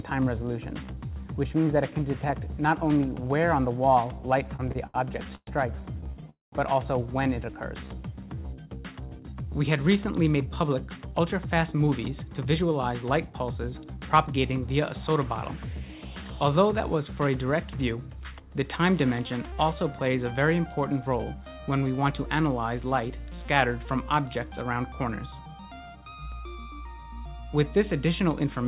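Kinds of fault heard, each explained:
Repeated stalls (stutter): From 4.56 to 6.24 s the sound drags and catches, halting ten separate times, with each hold stretching the last bit of sound, the longest about 119 ms. Packets were arriving late or slower than playback, so the jitter buffer kept running dry and the receiver bridged each wait by continuing the last sound. About 318 ms was filled in, roughly a fifth of that stretch. Nothing is lost, but the flow stumbles.
Call audio freeze: Right after the stutter, at 6.30 s, the sound hangs as a brief fading continuation of itself, then drops to silence for about 160 ms before resuming at 6.54 s exactly where it left off. The likely cause is packets held up in transit long enough to empty the jitter buffer, with the receiver filling about 225 ms while waiting. The gap is inserted time, and nothing is skipped.
Jitter buffer speed-up: The sound turns hurried without any change of pitch from 9.86 to 12.63 s, running at about 106% speed and shedding roughly 0.2 s. 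Shorter rushes follow at 16.94 to 18.11 s (104%) and 22.04 to 22.31 s (114%), each cutting a small fraction of a second. After delayed audio piled up, the buffer trimmed many tiny pitch-period slices in a row to bring its delay back down.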